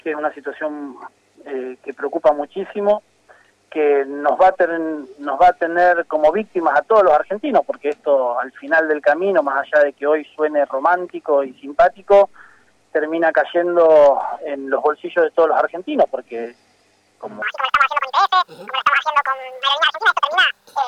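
From 17.42 s to the end, the audio is read two samples at a time, so it runs double speed and jumps an octave up.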